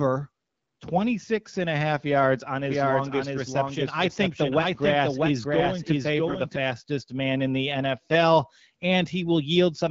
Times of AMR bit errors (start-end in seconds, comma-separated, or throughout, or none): 8.10-8.16